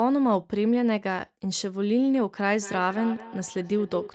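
From 2.62 s to 4.15 s, a second device on the call replays this microphone's audio into the room, where its echo canceller cannot remove it: feedback echo between two devices. Speech returns roughly every fifth of a second, thin and ringing, peaking about 14 dB below the original.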